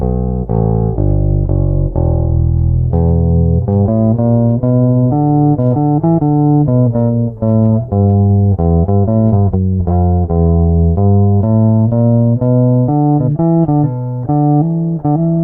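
Nothing stood out as a technical fault on listening.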